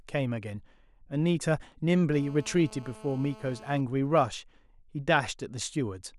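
Speech, with GSM phone buzz from 2.14 to 3.81 s: a raspy 217 Hz drone, about 22 dB under the voice, from a nearby handset's call bursts getting rectified.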